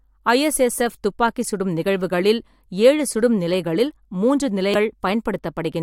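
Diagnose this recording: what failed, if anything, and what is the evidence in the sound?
Damaged data in a compressed stream at 4.74 s, a codec-stage failure heard as a brief disturbance in the speech. Corrupted bytes in the compressed stream made the decoder misread that frame, lose sync and hunt for the next valid frame header before resuming.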